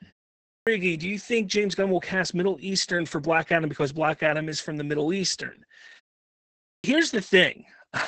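Speech here passes through Opus voice compression running its SILK coder at a very low rate, consistent with about 10 kbps in wideband mode; with nothing above 8.7 kHz and coarse excitation coding, the voice comes out muffled, hoarse and slightly robotic throughout. Separately, a clipped start after a pause occurs twice: the output device apparently sleeps in silence and must wake again, so after a 0.38 s gap the onset at 0.42 s loses about 0.25 s, and after a 0.65 s gap the onset at 6.57 s loses about 0.27 s, making the speech begin abruptly.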